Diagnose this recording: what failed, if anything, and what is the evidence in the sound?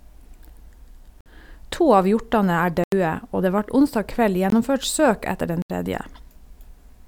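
Driver or buffer stage: four blocks of digital silence in the speech cut in and out with no fade at 1.21, 2.84, 4.50 and 5.62 s (53, 85, 21, 75 ms). The output buffer most likely wasn't filled in time.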